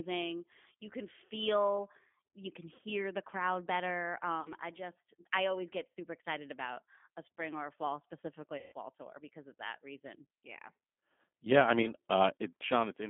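The whole speech clip runs through a G.729 codec, and the damage is plainly audible. The sound fits an 8 kbit/s G.729A coder squeezed into a telephone band of roughly 200 Hz to 3.5 kHz, so everything above that is gone. The coder rebuilds each frame from a filter, a pitch guess and a handful of pulses, which leaves the voice rough, slightly synthetic and a bit boxy.

On top of that come five spots of VoIP packet loss concealed by the speech codec. At 2.76 to 2.80 s, between "can feel you can" and "the crowd better", about 20 ms of audio is missing. At 4.41 to 4.50 s, just after "the crowd better" and before "I just I always", about 40 ms goes. Another 40 ms gap hits at 5.95 s. The longest is at 8.58 to 8.73 s, after "or a fall specifically" and before "tour because of that": about 140 ms, which fits several consecutive 20 ms packets dropping. The last is a 20 ms gap at 11.82 to 11.88 s. 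Each time the decoder keeps repeating its last pitch and filter at falling gain, so the voice smears into a buzzy tone or coloured noise that fades. It then takes a moment to sound right again after the packets return.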